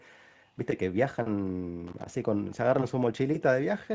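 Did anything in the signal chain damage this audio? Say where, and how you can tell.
Yes. From 1.87 to 2.06 s an irregular scratchy crackle bursts through. This is loose connector crackle in the analogue wiring, where a worn contact makes and breaks, chopping the signal.

A faint repeat of the speech appears at 2.50 to 2.57 s, about 30 dB down and 276 ms late. This is echo leak, likely a far-end echo canceller letting loudspeaker pickup through.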